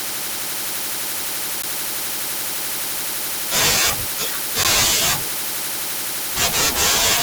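At 1.62 s and again at 4.64 s the speech drops out for about 13 ms, a gap between chunks. The audio was delivered in 3-second blocks, and each join has a short stretch of silence inserted rather than the next block following on directly, likely from padding or a late start at playback. Nothing is missing from the speech itself; it is simply interrupted, heard as two brief holes spaced 3 s apart.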